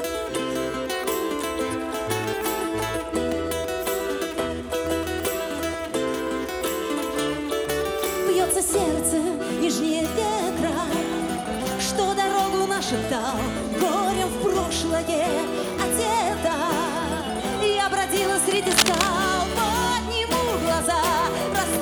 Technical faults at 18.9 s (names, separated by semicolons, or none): cable scratch noise